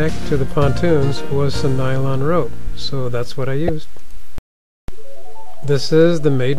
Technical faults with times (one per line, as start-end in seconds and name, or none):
3.66-3.69 damaged data in a compressed stream